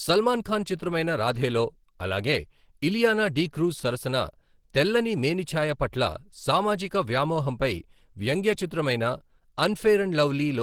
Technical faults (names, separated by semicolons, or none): Opus compression